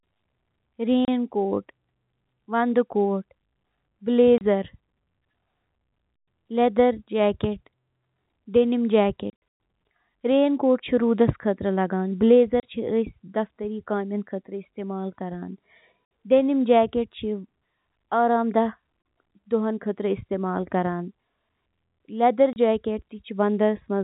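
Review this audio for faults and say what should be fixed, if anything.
Packet loss filled with silence cuts hard-edged holes into the speech at 1.05, 4.38, 12.6, 16.05 (60 ms), 19.02 and 22.53 s, each 30 ms except as noted, which fits 30 ms packets, plus a burst near 9.3 s losing 210 ms over 300 ms. The narrowband G.711 telephone band is audible throughout. Enable packet loss concealment and a jitter buffer at the receiver so lost packets are interpolated rather than replaced with silence.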